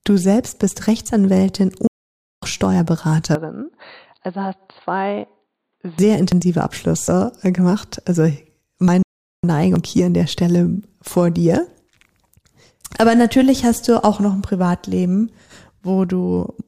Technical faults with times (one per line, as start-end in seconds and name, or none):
1.87-2.43 playback stall
3.35-5.99 input switched to a poorer device
6.32 dropped buffer (overrun)
7.08 dropped buffer (overrun)
8.88 dropped buffer (overrun)
9.02-9.44 playback stall
9.76 dropped buffer (overrun)